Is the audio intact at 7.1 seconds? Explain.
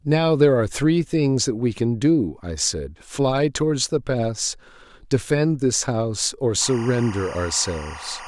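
No. From 6.61 s to the end, timecode bleed leaks 24-frame linear timecode into the speech, adding a chirping warble near 1 and 2 kHz, roughly 15 dB below it.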